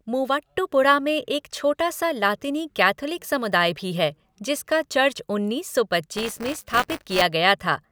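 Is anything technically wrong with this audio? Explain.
Yes, there is buffer tearing from 6.17 to 7.22 s, just after "जिसका चर्च उन्नीस सौ". The writer and the playback reader have slipped and cross inside each period, so a small slice of every buffer replays audio about 20 ms old between hard joins. This produces a robotic 200 Hz rattle that, unlike a mains hum, follows the speech and drops away in silence.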